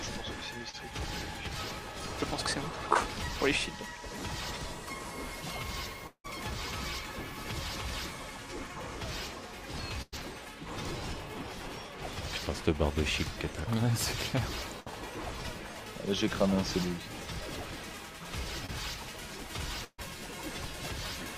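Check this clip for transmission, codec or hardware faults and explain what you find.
Several network faults are audible, all from audio failing to arrive and being patched by the receiver.

Short concealed packet loss occurs at 0.69–0.75 s, 2.93–2.97 s and 18.66–18.70 s, each removing 20 to 40 ms. The decoder had nothing to play for those instants and extended the preceding sound before blending back in. Each is heard as a quick smear or wobble. A spectrogram shows a brief stretch of repeated or blurred harmonics, and the waveform shows a slightly repetitive patch with a soft seam.

Around 6.07–6.26 s roughly 180 ms of audio is gone. The preceding sound is stretched into a fading buzz or hiss lasting about 170 ms, and about 80 ms of it sits near silence before the audio resumes further along. This is likely a long network dropout. On a spectrogram the harmonics continue flatly, then thin into faint noise and a near-empty band. 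The waveform shows a decaying envelope, then almost nothing.

There are bursts of packet loss at 10.02–10.14 s, 14.80–14.88 s and 19.84–20.00 s, losing about 100 ms, 60 ms and 140 ms respectively. Consecutive packets failed to arrive, so the receiver held the last sound and turned it down as the gap lengthened. The result is a held buzz or fading hiss, then a jump forward. The first and last bursts decay to silence, for about 30 ms and 60 ms. A spectrogram shows frozen, dimming bands, and the waveform a shrinking envelope before an abrupt restart.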